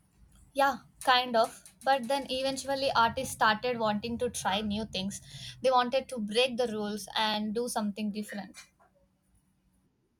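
The speech was handled in 2-second chunks that overlap, so each chunk begins 20 ms before the previous one finished, and that sliver of audio plays twice at every join. These overlapping chunks produce a brief click or stutter at 1.28–1.30 s, 3.30 s, 5.32 s, 7.34–7.36 s and 9.36–9.38 s. Because the joins fall every 2 seconds, the hiccups come at a steady, regular rhythm through the recording.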